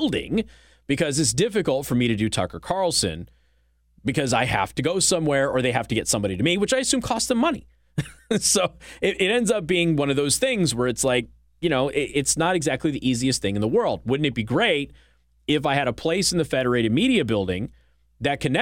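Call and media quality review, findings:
No faults found in recording.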